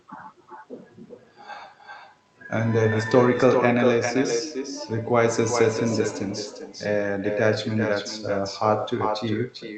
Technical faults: echo with no canceller

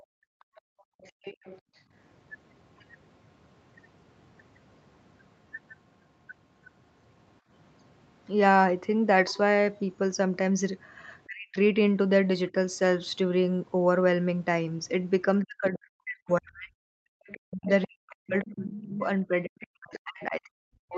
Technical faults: other side's voice leaking through; background gated by the echo canceller; speech suppressed in double talk

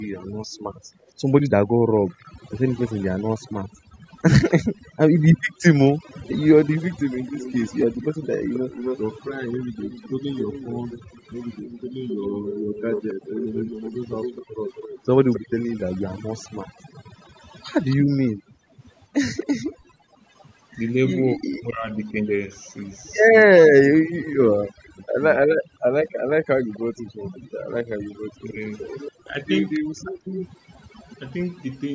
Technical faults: overdone noise removal; background gated by the echo canceller; echo leak; speech suppressed in double talk

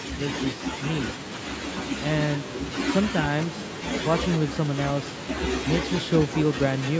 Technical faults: echo with no canceller

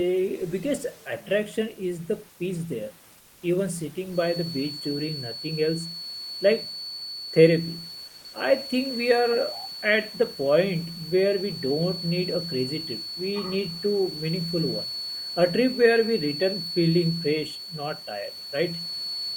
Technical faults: comfort noise in place of the background

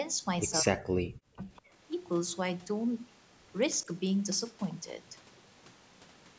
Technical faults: speech suppressed in double talk; echo leak

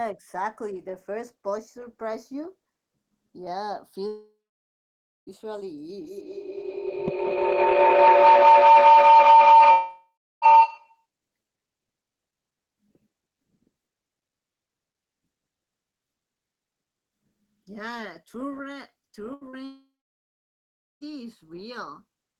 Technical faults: channels drifting apart; long network dropout; feedback howl; burst of packet loss; short concealed packet loss

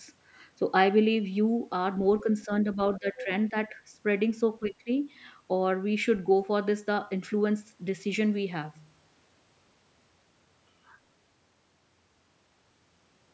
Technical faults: speech suppressed in double talk

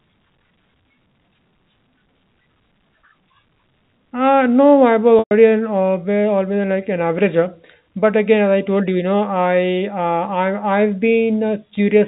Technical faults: packet loss with pitch repetition

